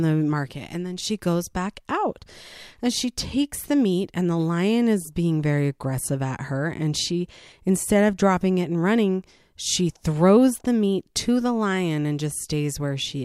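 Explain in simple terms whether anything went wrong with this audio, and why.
Listening to this recording of speech, nothing stood out as having gone wrong at any point.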